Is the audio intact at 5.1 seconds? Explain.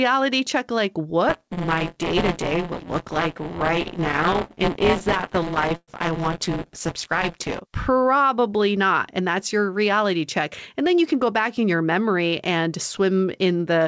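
No. From 1.29 to 7.60 s, buffer tearing is under way: the writing program and the playback hardware have slipped out of step in the ring buffer, so a small slice of each period holds audio roughly 20 ms stale, hard-joined on both sides. The speech carries a robotic buzz at 172 Hz, which fits a 256-sample buffer.

Overlapping that, repeated stalls (stutter) run from 4.99 to 5.90 s. Packets arrived late, the jitter buffer ran dry eight times, and the receiver stretched the last sound to fill 181 ms, the longest wait 112 ms. Nothing is lost, but the speech drags and stutters.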